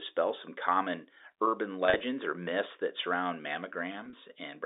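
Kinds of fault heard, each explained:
Packet loss with pitch repetition: gaps are filled by repeating the last pitch cycle, so losses of at most 30 ms sound like a brief buzzy hold rather than silent dropouts or clicks. About 80 ms goes missing at 1.86–2.00 s, after "some common urban", and 40 ms at 4.05–4.13 s.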